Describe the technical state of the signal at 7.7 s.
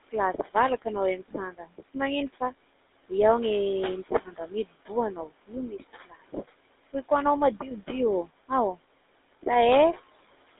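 At 7.7 s, two faults are active, and both run through the whole clip. The first is noise suppressor artifacts. The suppressor judges which bands hold steady noise and lowers them frame by frame, by about 21 dB here. The room noise, about 16 dB under the speech, drops away in gaps and returns beneath the talking.

The second is GSM full-rate codec damage, plainly audible. The voice is rebuilt from a vocal-tract model driven by spaced pulses, which gives a buzzy, gravelly roughness. The sound is confined to roughly 300 Hz to 3.7 kHz, which fits a 13 kbps GSM full-rate link.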